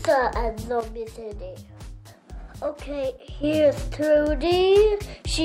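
At 0.81 s the audio and its background noise drop together by about 8 dB in a single step, then jump back at 3.44 s: a sudden gain jump, likely a gain setting applied without a ramp. The waveform shows a hard-edged step in envelope height, and the spectrogram dims uniformly across all frequencies.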